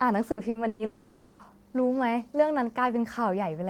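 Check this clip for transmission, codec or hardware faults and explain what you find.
Yep, there's trouble early on: three packet-loss bursts and then a longer dropout, all in the first second and a half of the speech.

Burst of packet loss at 0.31, 0.49 and 0.67 s: the receiver keeps playing the last bit of sound for about 60, 60 and 120 ms, letting it fade to a buzz or hiss, then jumps ahead. That much audio is simply gone.

Long network dropout from 0.85 to 1.50 s: there's a fading held sound lasting around half a second, with no silence after it, before the speech returns. The likely cause is the stream stalling entirely, with concealment covering the roughly 540 ms that never arrived.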